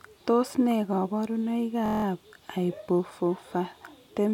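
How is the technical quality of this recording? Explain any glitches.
The recording has one glitch. A system hang loop runs from 1.86 to 2.04 s: the system stalled while the audio hardware kept replaying one 23.2 ms chunk, which fits a 1024-sample buffer, eight times over. This produces a steady buzz at about 43 Hz before the speech resumes, with essentially nothing lost.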